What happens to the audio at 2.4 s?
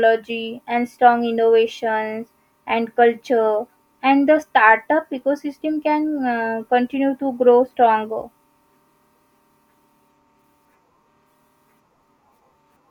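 Nothing goes wrong at 2.4 s; the speech runs through that moment intact, with no dropout, click or distortion.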